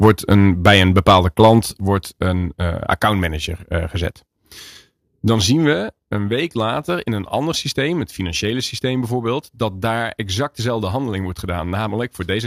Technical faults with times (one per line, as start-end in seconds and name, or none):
0.02-1.54 microphone overload
0.06 microphone volume stepped down
1.80 microphone volume stepped down
5.73 microphone volume stepped down